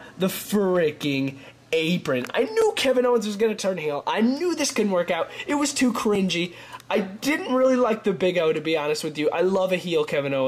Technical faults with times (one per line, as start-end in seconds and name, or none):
2.62 block of digital silence
6.15 block of digital silence